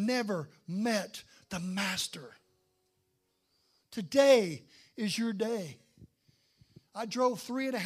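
No technical faults can be heard anywhere in this speech recording.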